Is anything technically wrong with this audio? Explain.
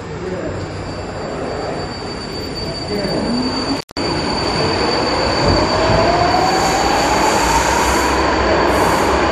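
Yes, there is one fault: an intermittent contact from 3.76 to 3.97 s. A loose cable or plug briefly loses connection, so the signal path opens for about 0.16 s. The sound cuts out with a crackle at each edge as the contact scrapes open and shut, and faint hiss remains during the gap. The crackly edges and residual hiss set it apart from a digital dropout, which leaves a clean silent gap with sharp, tidy boundaries.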